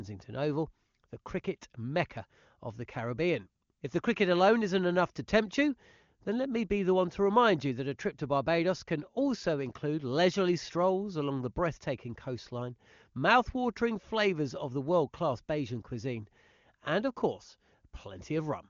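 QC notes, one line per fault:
No faults are audible in the speech. It runs through the AMR wideband (HD Voice) codec, with nothing above about 7.3 kHz and a clarity that points to one of its highest rates, around 23.85 kbit/s.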